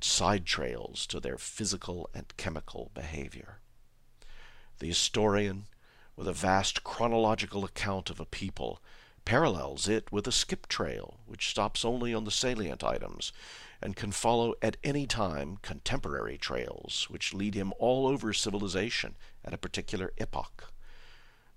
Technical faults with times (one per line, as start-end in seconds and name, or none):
none